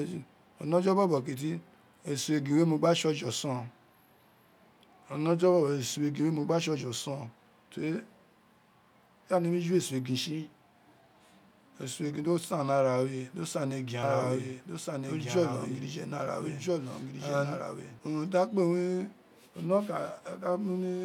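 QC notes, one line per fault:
14.03–17.99 s, doubled audio track: right after "do san ni egin", a second full-band copy of the speech runs about one and a half seconds behind the original, a few dB quieter, and cuts off abruptly before "unin di akpe". It likely comes from the signal being captured again through a slower path. Unlike echo or reverb, there is only one delayed copy, with no decay, no room colour and no repeats, and it starts and stops sharply.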